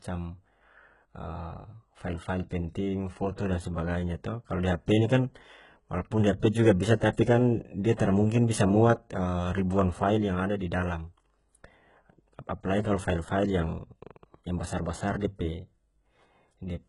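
A speech recording whose treble was likely rebuilt by HE-AAC compression, with spectral band replication copying lower bands upward instead of coding them; the heavy damage fits a very low bitrate around 12 kbps. Sibilants turn gritty and metallic, and nothing remains above 11.1 kHz. Pre-echo occurs where the codec spread quantisation noise across a block holding a sharp onset, so about 20 ms of hiss precedes the attacks at 3.36 to 3.38 s and 15.20 to 15.22 s, leaving them soft and smeared.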